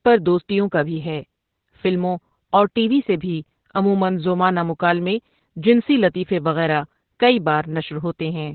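From start to finish the speech carries heavy Opus voice compression. Nothing sounds above about 4.3 kHz, so the voice is muffled and phone-like, pointing to the narrowband SILK mode at a very low rate, around 8 kbps. Coarsely coded excitation makes it hoarse and faintly robotic. On a spectrogram the energy stops at a flat ceiling near 4.3 kHz, and the harmonics below look smeared and blotchy.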